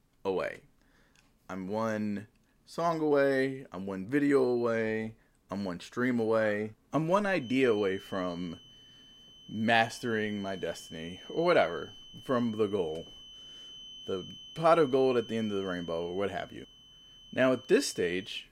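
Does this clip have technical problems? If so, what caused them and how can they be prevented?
Yes. From 7.34 s to the end of the clip, a feedback whistle sits behind the speech as a thin, steady tone at 3 kHz, roughly 20 dB below the voice and swelling and fading slowly in level. This is likely a loudspeaker-to-microphone loop running just at the edge of instability, so the one frequency with the highest loop gain keeps ringing without building into a full howl. To prevent it, reduce monitor or microphone gain, move the microphone away from the loudspeaker's coverage, or notch 3 kHz.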